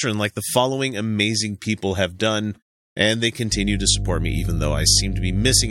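Mains hum enters at 3.50 s and runs to the end of the clip at 5.71 s. A ground loop or a nearby transformer is letting the 50 Hz power line leak into the signal path, so a steady low tone at 50 Hz, with a few low harmonics above it, sits under the speech. It is strong, roughly as loud as the speech itself, so the drone is plainly audible throughout the final two seconds.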